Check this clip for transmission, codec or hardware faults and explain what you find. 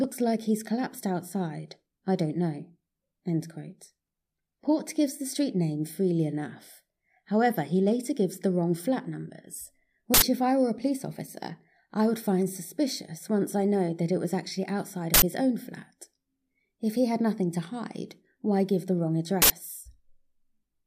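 Three short, loud bursts of digital noise cut into the speech, each an uninitialised buffer fault lasting 80 ms:

10.14 to 10.22 s, after "the wrong flat numbers" and before "if I were a"; 15.14 to 15.22 s, after "it was actually outside" and before "his own flat"; 19.42 to 19.50 s, after "why give the wrong". Each is an abrupt blast of harsh noise, caused by a block played back before any audio was written into it, so stale memory contents came out as samples.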